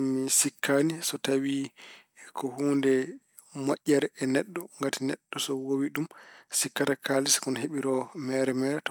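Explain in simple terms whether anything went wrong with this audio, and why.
Nothing went wrong here: listening through the recording turns up no dropouts, clicks, distortion or glitches anywhere in the speech.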